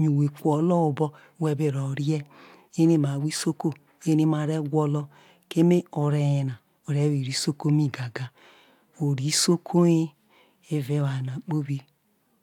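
No technical faults can be heard anywhere in the recording. Nothing in the signal path calls for comment.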